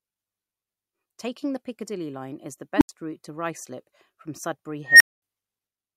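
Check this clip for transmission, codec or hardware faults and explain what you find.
Two bursts from an unstable filter show up in this speech clip. At 2.76 s a tone around 300 Hz swells over about 48 ms, clips, then drops into roughly 80 ms of silence, ending by 2.89 s. At 4.86 s it happens again higher, near 2 kHz, building for about 146 ms before a 220 ms dropout, done by 5.22 s. A recursive filter got coefficients that pushed it past stability, so its output kept feeding on itself, grew until it overflowed, and cut out until the filter reset.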